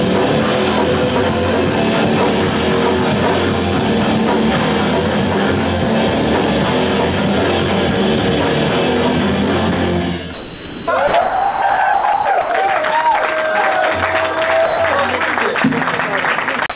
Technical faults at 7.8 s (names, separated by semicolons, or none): none